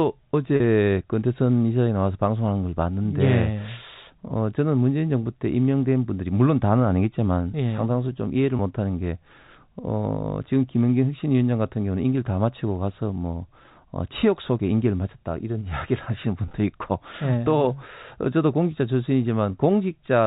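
Brief held, buzzy tones at 0.56–0.60 s, 8.57–8.59 s and 16.46–16.54 s come from packet loss with pitch repetition. The receiver bridged missing stretches of 40 ms, 20 ms and 60 ms (the last scattered over 80 ms, in runs of at most 20 ms) by repeating the previous pitch period.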